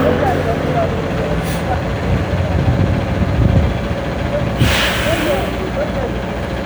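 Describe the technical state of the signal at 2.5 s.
Mains buzz runs from 1.08 s to the end of the clip, so it is present at 2.5 s. Spiky interference locked to the 60 Hz supply, repeating twice per cycle, spreads harmonics up into the kilohertz range, giving a steady, raspy buzz about 10 dB below the sound.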